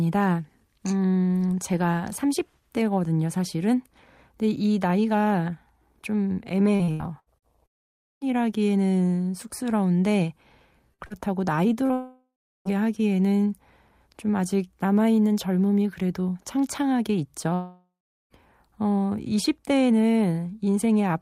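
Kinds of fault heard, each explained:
Repeated packet loss (robotic sound): speech packets went missing five times in quick succession from 6.75 to 7.45 s, each patched from prior sound, leaving choppy speech.
Long network dropout: audio stopped arriving, likely from a network outage, at 7.66, 11.93 and 17.54 s; a fading continuation gives way to silence before speech resumes, missing its lost portion.
Short concealed packet loss: about 40 ms went missing at 10.94, 11.06 and 11.86 s, filled by extending the preceding sound, heard as brief smears or wobbles.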